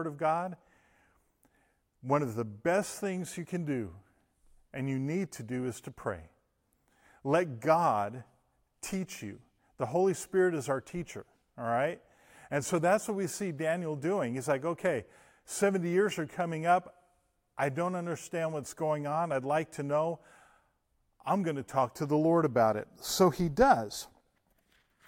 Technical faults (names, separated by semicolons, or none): none